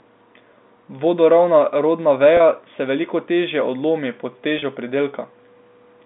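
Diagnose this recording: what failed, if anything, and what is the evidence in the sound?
At 2.37 to 2.40 s, just before "se veliko težje odlomi", and again at 4.59 to 4.62 s, the speech briefly holds with a buzzy tone. This is network packet loss with pitch repetition: each 30 ms gap, fitting one lost packet, was filled by repeating the last pitch period.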